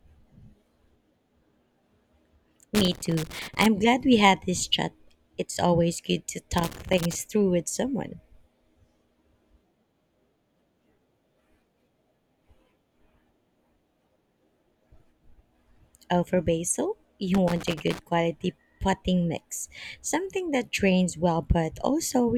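A worn or dirty contact in the signal path keeps making and breaking, chopping the speech into irregular bursts of scratchy loose connector crackle: from 2.75 to 3.66 s before "glad we had this", from 6.58 to 7.15 s after "always good to", and from 17.34 to 17.99 s after "for basil".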